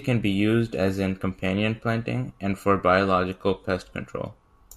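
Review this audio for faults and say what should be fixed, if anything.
No faults; nothing needs fixing.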